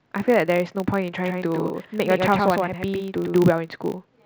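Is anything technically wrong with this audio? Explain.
Yes, two faults are audible in this speech clip.

From start to finish there is a filter restarted on every block. Each processing block begins from silence instead of carrying the filter's state over, so every block boundary leaves a small transient. These arrive 50 times a second, which fits blocks of about 20 ms, and form a 50 Hz buzz. Unlike mains hum at the same frequency, it rises and falls with the speech level rather than sitting at a constant level.

From 1.24 s to 3.36 s there is a doubled audio track: a second full-band copy of the speech trails the original by roughly a tenth of a second, at about 5 dB quieter. The likely cause is the same signal being captured a second time through a slower path. It differs from a room echo or reverb because there is only one repeat, with no decay or room colouring, and the copy begins and ends abruptly.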